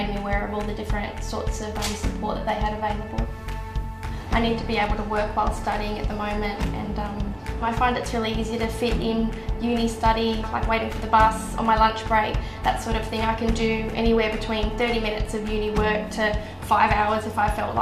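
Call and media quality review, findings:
No findings for this call and media quality review.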